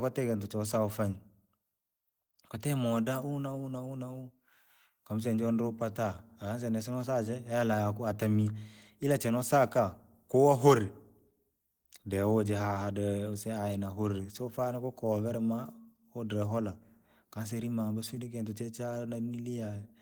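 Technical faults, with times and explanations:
No technical faults can be heard anywhere in the speech recording; the signal stays steady and intact throughout.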